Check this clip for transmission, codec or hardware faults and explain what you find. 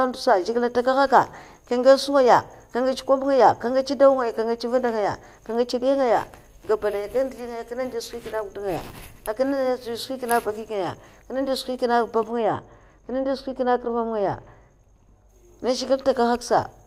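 One fault turns up, in the speech from 12.31 to 15.29 s, where it goes suddenly dull and muffled. That is wrongly applied de-emphasis: a treble cut meant to undo pre-emphasis hits audio that never had it, or is applied twice, sloping smoothly down to about 14 dB below 1 kHz by 10 kHz.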